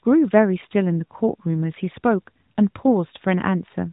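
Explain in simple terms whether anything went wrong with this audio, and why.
Something did go wrong, briefly. From about 0.66 to 0.74 s the speech turns hoarse and gargly for a moment. That's AMR bit errors: on a shaky mobile link, a few percent of the less-protected bits in the phone codec's data got flipped. The pitch and loudness hold roughly steady, but the fine detail gets scrambled, so it comes out scratchy. The blip is about 80 ms, which fits roughly four 20 ms codec frames.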